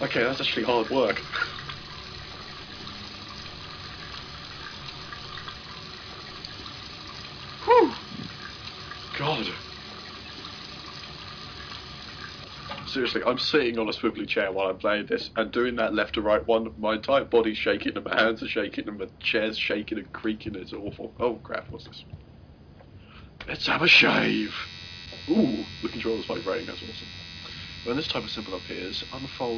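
No technical faults are audible.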